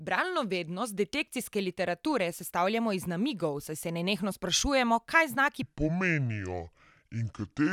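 At 5.63 s, right after "nenehno sprašujemo kaj znaki", the speech drops to the wrong speed and stays there to the end. It plays at 0.623 times normal speed, roughly seven semitones lower. The voice turns deep and dragging. A wrong playback clock is the likely cause.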